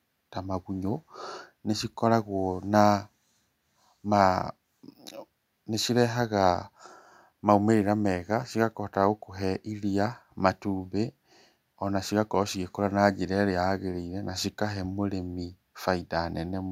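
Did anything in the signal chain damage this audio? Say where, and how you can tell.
No, nothing in the chain seems to have damaged this speech recording, and I can't point to any stage where something went wrong.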